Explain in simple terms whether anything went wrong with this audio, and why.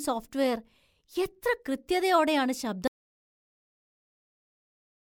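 Something did go wrong. At 2.88 seconds the speech stops in mid-flow, and from there to the end of the clip there is nothing at all. This is an audio dropout to silence. The gap is not just quiet. It is completely empty, with no room hum or background left. The likely cause is that the microphone or its connection cut out, or something was muted, while the recording kept running and saved blank audio. Whatever was said after that point is lost.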